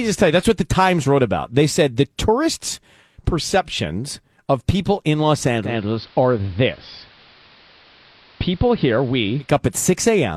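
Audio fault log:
5.62–9.54 s, digital radio blending to analogue: the receiver lost the digital stream and cross-faded over 150 ms to the station's AM broadcast, then back. The speech turns duller, drops about 1 dB, and picks up hiss roughly 30 dB down.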